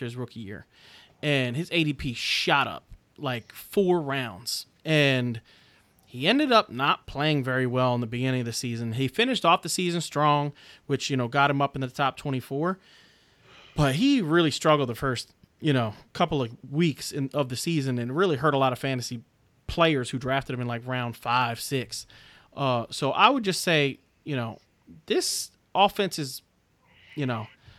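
No technical faults can be heard anywhere in the speech.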